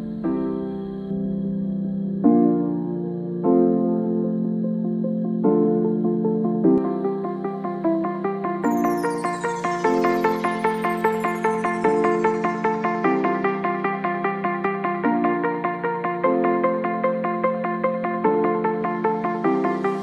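From 1.11 to 6.78 s, de-emphasis was applied wrongly: a treble-cutting filter meant to reverse pre-emphasis acted on audio that needed no such correction. The response tilts smoothly downward, about 11 dB lower at 10 kHz than at 1 kHz, so the sound turns dull and muffled.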